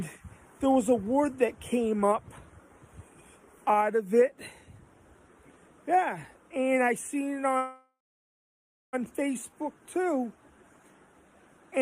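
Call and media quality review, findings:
Call audio freeze, 7.57–8.95 s: sound stalls into a fading buzz or hiss, then about 1.0 s of silence, and resumes where it stopped with nothing lost, unlike a dropout. Likely jitter-buffer underrun from delayed packets.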